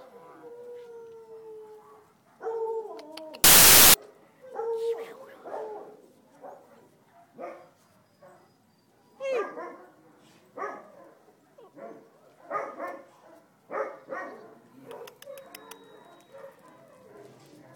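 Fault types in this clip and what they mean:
Samples built from the wrong bytes: the reader assembles each sample's bytes misaligned or in swapped order, so the jittery low bits dominate, producing a burst of loud, harsh broadband noise from 3.44 to 3.94 s. It shows as dense hash on the waveform and broadband fill on the spectrogram.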